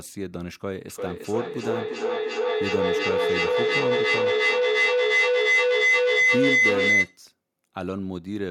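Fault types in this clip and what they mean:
Feedback howl: Two devices share a call in the same room, so sound leaving a loudspeaker re-enters a microphone and comes back louder each trip. In this speech clip the howl starts at about 0.9 s and holds until 7.24 s. It settles near 2 kHz, pulsing roughly every 400 ms as the loop cycles. At its peak it sits about 9 dB above the speech. It ends only when the loop is broken.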